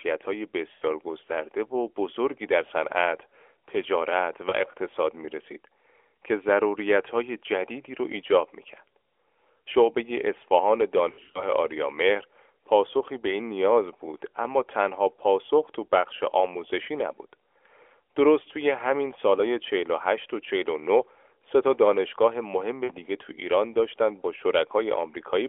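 Lost AMR speech frames occur four times in this narrowband speech. At 0.72–0.85 s a 100 ms gap, which fits five 20 ms frames, is filled by the decoder repeating its last pitch and vocal tract settings at falling gain, so the sound stretches and fades. At 4.50–4.53 s a single lost frame gives a brief dip. From 11.10 to 11.45 s losses scattered over 240 ms, in runs up to 60 ms, produce repeated warbles. At 22.84–22.93 s a 60 ms run smears and fades before the sound returns weak.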